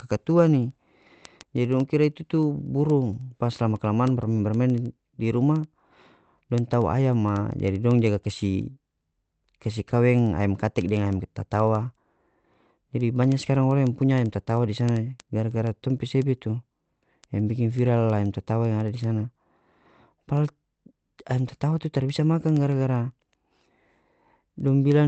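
A steady train of sharp, uneven clicks runs through this speech from 0.16 s to the end, about every 70 ms. These are word clock ticks: the receiving digital input runs on its own clock, off by a few hundred parts per million, so one sample slips with each tick. The Opus call path's treble stops near 8 kHz.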